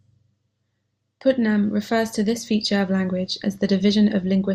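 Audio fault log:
throughout MP2 compression: the speech sounds dull and muffled, with a gurgling, granular texture as upper bands flicker in and out. This is likely Layer II coding starved of bits, switching off high sub-bands and coarsely quantising the rest, which fits about 80 kbps.
3.84–3.89 s DAB burbling: just after "this feature of language", a brief burst of burbling cuts across the speech for about 50 ms. Bit errors slipped past error correction into roughly two frames, corrupting the MP2 audio data.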